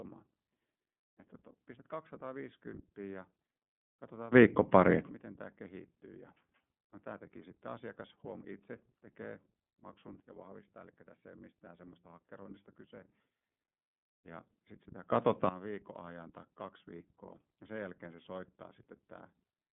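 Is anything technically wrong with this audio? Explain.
Yes. Two problems can be heard: narrowband iLBC codec coding across the whole speech clip, and three sudden gain jumps.

The iLBC codec damage runs throughout and is plainly audible. The sound sits in a telephone band of roughly 150 to 3400 Hz, with nothing above 3.6 kHz. It also has a rough, slightly synthetic grain. The 13.33 kbps rate and 30 ms frames fit iLBC, which codes each frame's excitation independently of the one before. A simple low-pass filter would dull the sound but leave it smooth, so the grain is what separates the two.

The sudden gain jumps, likely from a gain change applied with no ramp, occur in three places:
From 4.33 to 5.09 s the level leaps up by about 24 dB, just before "miten tämä kehittyy".
From 10.20 to 13.01 s it drops by about 6 dB.
From 15.10 to 15.49 s it rises by about 14 dB, ending right before "viikon ajan tai kaksi".
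Each change is instantaneous at its edges. The background noise steps along with the speech, which rules out compressor or AGC pumping, since those glide.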